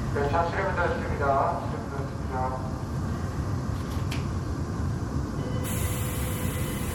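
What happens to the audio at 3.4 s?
Likely MP3 compression at a low bitrate, about 64 kbps, applied throughout: starved frequency lines flicker on and off, giving plainly audible watery, swirling artefacts and smeared attacks.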